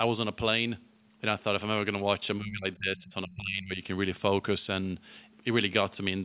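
From 2.39 to 3.8 s the speech level dips, falling by around 20 dB at its deepest, with roughly a second of that window affected in total. The pattern fits speech suppressed in double talk. Far-end audio was likely playing on the loudspeaker while this talker spoke, and the echo canceller, unable to tell the local talker from the loudspeaker echo, attenuated both.

Within that stretch, from 2.98 to 3.13 s, a second voice is audible at around 25 dB below the main speech. This is the other side's voice leaking through. The far-end signal was likely played on this device's loudspeaker and picked up again by the microphone, and the echo canceller did not remove all of it, so a short scrap of residual echo remains. Like the rest of the clip, it is band-limited to 4 kHz by the G.711 call path.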